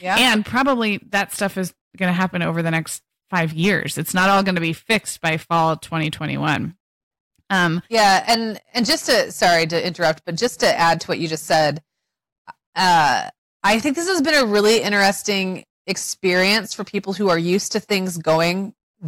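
Speech with hard clipping throughout, driven about 10 dB past full scale: a few percent of samples flatten, giving crackly fuzz on peaks, flat-topped waveform tops, and broadband harmonic smear spectrally.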